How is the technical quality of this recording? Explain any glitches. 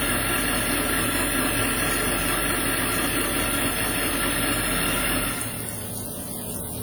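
The technical quality is noticeably compromised by codec damage throughout. Across the whole clip there is plainly audible WMA compression, likely from a long-block transform encoder at a low rate, which fits roughly 48 kbps. Quantisation noise smears over tens of milliseconds, giving a ringing, washy texture and a hiss that breathes with the sound. Content extends to about 20.1 kHz, so this is not bandwidth limiting or a low-pass dullness.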